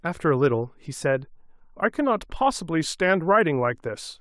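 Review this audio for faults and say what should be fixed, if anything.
No faults turn up in this audio, so nothing needs to be fixed.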